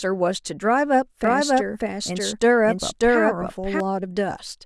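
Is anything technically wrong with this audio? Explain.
Yes. From 1.24 to 3.80 s there's a doubled audio track: a second copy of the speech, just as loud, trails around 0.7 s behind, likely from a slower capture path.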